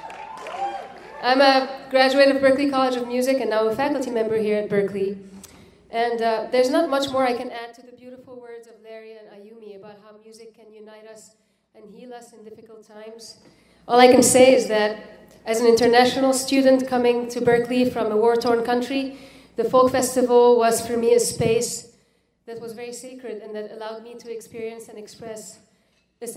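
Three level changes are applied as unsmoothed 2 dB steps, producing zipper noise each time. From 7.34 to 7.90 s the level drops by around 20 dB at roughly twenty steps a second. From 12.91 to 13.93 s it rises by around 20 dB at about ten steps a second. From 21.55 to 22.11 s it falls by around 15 dB. Each jump clicks, so a ticking zip rides on the sound while the level moves.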